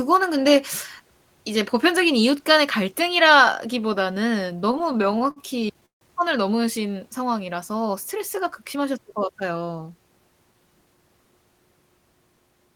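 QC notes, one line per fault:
4.57–6.03 s repeated stalls (stutter): packets reached the receiver late or slower than playback, so the jitter buffer emptied 18 times. Each gap was filled by stretching the last sound, the longest 154 ms and faded, totalling 355 ms (24% of the stretch). Speech drags and stutters, though nothing is lost.
8.62–9.14 s jitter buffer speed-up: the buffer held more audio than its target, so the receiver trimmed short pitch-period slices repeatedly, removing about 70 ms. Speech runs at 110% speed with unchanged pitch, sounding briefly hurried.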